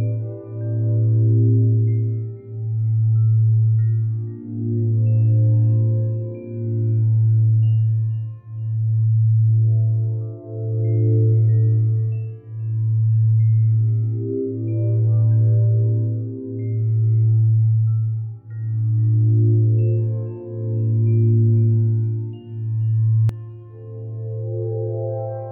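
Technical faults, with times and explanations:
23.29 s to end: doubled audio track, a full-band copy trailing about 200 ms at roughly equal level, starting abruptly, likely from a slower second path.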